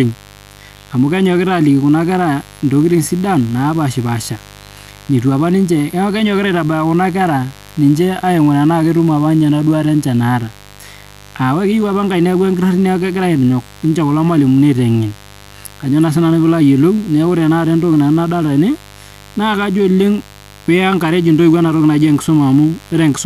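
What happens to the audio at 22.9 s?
At 22.9 s a steady, raspy mains buzz sits under the speech, roughly 25 dB below it. It isn't a momentary event: the same hum runs through the whole clip and is still there at this point. It is 50 Hz mains interference, most likely from a dimmer, rectifier or unshielded cable letting sharp switching spikes in twice per cycle. Those spikes carry harmonics of 50 Hz up into several kHz, giving the buzz its gritty edge.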